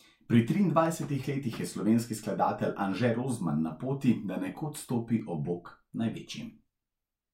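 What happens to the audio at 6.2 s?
At 6.2 s the speech is near the end of a run of regular clicks that starts at 0.86 s and stops at 6.28 s, recurring every 1.09 s for about seven events. The steady spacing points to clock drift buffer slips as the likely cause. Two devices on independent clocks, differing by roughly 150 ppm, let the buffer creep until a few samples are dropped or repeated, and each slip is heard as a click.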